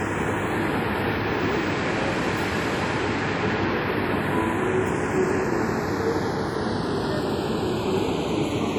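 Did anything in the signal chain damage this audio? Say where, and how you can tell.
Yes. At the converter or capture stage, the channels are drifting apart throughout. Clocks differing by roughly 50 ppm slide the inter-channel delay to a fraction of a millisecond, heard as slow flanging in mono.

At the codec stage, the sound carries the artefacts of an earlier encoding throughout and stops at 20 kHz, likely low-bitrate audio, probably AAC, saved at a high bitrate as MP3, which cannot restore what was lost.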